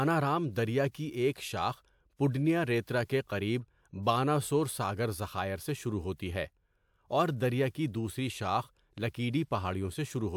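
No technical faults can be heard in this recording at any point.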